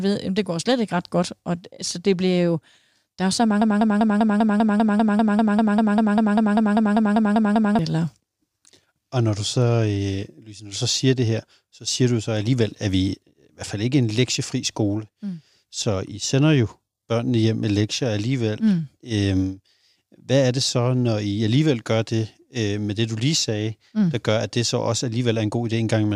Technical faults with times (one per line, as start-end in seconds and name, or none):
3.62-7.79 broken-record loop